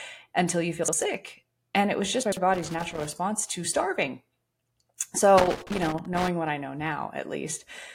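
At 0.84 s a block of audio about 46 ms long was delivered one block late and played after the block meant to follow it. Nothing is lost, but the chunks are out of order until 0.93 s, so the speech briefly jumbles. At 2.23 s a block arrives two places late, giving a longer scrambled stretch to 2.37 s.

From 2.54 to 3.13 s, and again from 5.38 to 6.28 s, a contact in the signal path is making and breaking rapidly, the behaviour of a loose or dirty connector. The signal is chopped on and off irregularly, so each stretch carries a burst of loose connector crackle: scratchy, uneven crackling laid over the speech.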